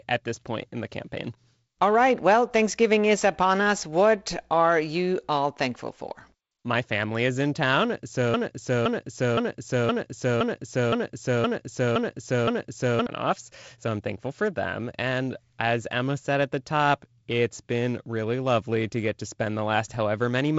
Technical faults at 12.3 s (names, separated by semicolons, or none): broken-record loop